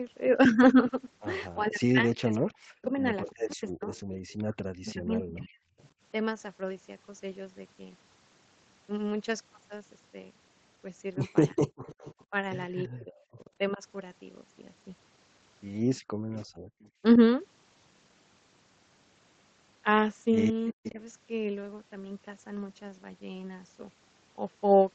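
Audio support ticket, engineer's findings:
Echo leak at 2.39–5.89, 11.5–12.25, 15.98–16.89 and 20.67–20.91 s. Delayed copy of the speech, 333 ms late, roughly 15 to 25 dB down. Likely far-end echo canceller letting loudspeaker pickup through.

Speech suppressed in double talk at 1.57–5.61, 12.31–13.83, 17.16–17.2 and 20.72–20.99 s. Speech dips in pieces, up to around 40 dB. Likely canceller confusing the talker with echo, attenuating both.

Background gated by the echo canceller at 16.01–16.81 s. Room sound drops about 40 dB, then returns. Canceller clamping the microphone while the loudspeaker played, releasing afterwards.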